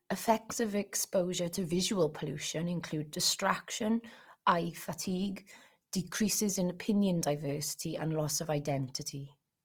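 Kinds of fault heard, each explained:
Opus compression: Throughout the speech there is a plainly audible grainy, rough texture, likely from Opus coding in its music (CELT) mode at a rate that fits 24 kbps. When bits run short, the encoder keeps each band's energy but fills in detail by folding lower bands or adding noise. On a spectrogram, the content reaches up to 20.5 kHz, but harmonics look smeared into noise-like speckle. The waveform envelope looks unchanged.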